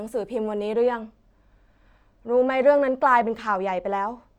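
From 0.73 s to the end, the speech turns dull. This is channel delay (comb filtering). One channel arrives late, and the two are summed to mono. A notch near 10 kHz dulls the top, which fits a delay of about two samples.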